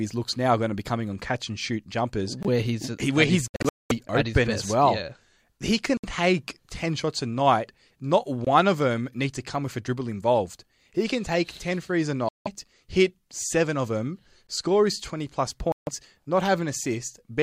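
At 2.43 s, 8.45 s and 14.47 s, a gap between chunks leaves a 20 ms hard-edged silence every 6 s, visible as thin blank columns on a spectrogram. Between 3.48 and 3.91 s, a stretch of sound is missing in scattered pieces, with the longest hole 213 ms. This is likely a Bluetooth dropout. Further holes follow at 5.97–6.05 s, 12.29–12.48 s and 15.72–15.89 s, each showing as a flat waveform before the sound resumes later.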